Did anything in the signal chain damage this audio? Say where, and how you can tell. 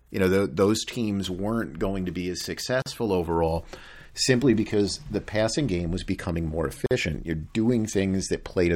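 Yes, at the codec stage: a gap at a join of encoded pieces. The speech drops out for 41 ms at 2.82 s, after "going to be as", and 49 ms at 6.86 s, after "game was becoming more". The 4 s spacing points to separately encoded pieces joined with their padding left in.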